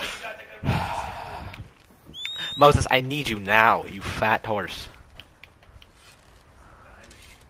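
No technical faults can be heard anywhere in the audio, and the signal holds steady without any break or disturbance.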